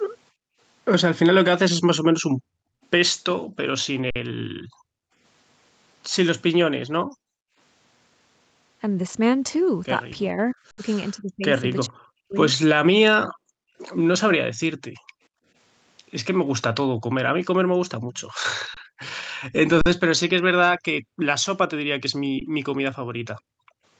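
Speech recorded through a call's microphone processing, which cuts everything above 8 kHz, shows four kinds of fault. The echo canceller repeatedly clamped the microphone while the loudspeaker played, gating the background. The room sound drops away, by about 31 to 40 dB at its deepest, at 0.31–0.6 s, 2.29–5.18 s, 7.03–7.57 s, 13.27–15.46 s, 16.97–19.0 s and 21.01–23.83 s. In several underruns with a held sample, the output buffer ran dry and the converter froze on its last value. The sound stalls flat, without a click, then resumes where it stopped: at 4.10 s for 52 ms, 10.71 s for 70 ms, 18.74 s for 23 ms (which fits a 1024-sample buffer), 19.81 s for 46 ms (fitting 2048 samples) and 22.40 s. Between 10.32 and 12.36 s the voice sinks by roughly 40 dB in pieces totalling about a second, most likely speech suppressed in double talk as the canceller turned down both sides at once. At 18.14–18.21 s a faint copy of the voice returns 441 ms late, about 35 dB down, likely an echo leak from a loudspeaker whose echo canceller failed to fully cancel it.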